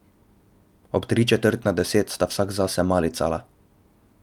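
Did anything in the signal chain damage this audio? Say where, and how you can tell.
No, nothing in the signal chain damaged this audio, and there is nowhere to point to.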